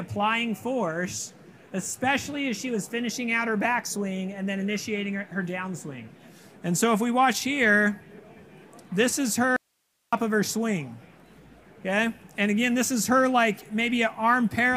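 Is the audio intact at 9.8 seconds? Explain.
No. From 9.56 to 10.13 s an audio dropout to a faint residue leaves only hiss, roughly 50 dB below the signal, likely from the wanted signal being lost while the path stayed live. The waveform collapses abruptly to a thin band; the spectrogram shows only faint broadband noise.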